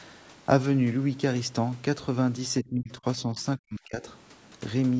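From 2.62 to 4.03 s, the speech dips and breaks up in pieces, falling by around 30 dB at its deepest over about a second in total. This is likely speech suppressed in double talk. The echo canceller mistook the talker for echo and turned it down.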